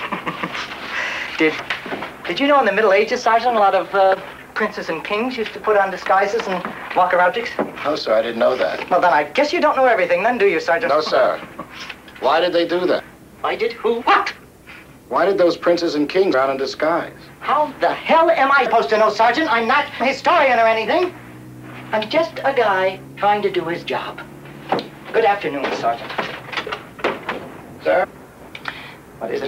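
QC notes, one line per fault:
1.58, 7.25, 12.98, 14.00, 16.33, 18.65, 19.99, 28.03–28.05 s: compressed frames skipped. Runs of whole frames never reached the output, so the sound jumps forward by roughly 100 to 500 ms each time, in steps that fit 23.2 ms frames. Overlapping frames blur each join into a short smeared blip, not a hard click.
15.86, 22.39 s: bit error spike. A single flipped bit in one sample throws its value off by a power of two, and it snaps straight back on the next sample. Each is heard as one sharp broadband tick with no connection to the surrounding sound.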